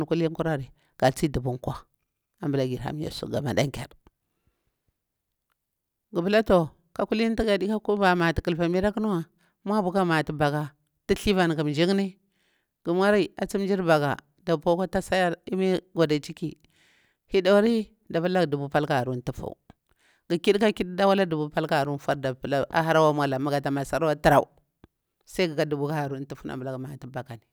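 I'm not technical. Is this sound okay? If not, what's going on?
Yes, this speech recording is technically sound, with no problems in the signal to worry about.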